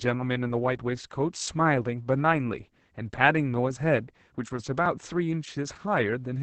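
Opus voice compression runs through the whole clip. The speech has the muffled, hoarse and faintly robotic quality of the codec's SILK linear-prediction mode starved of bits. Everything above about 8 kHz is cut away, which fits a wideband setting, and the excitation is coded coarsely. The heavy damage points to a bitrate around 10 kbps.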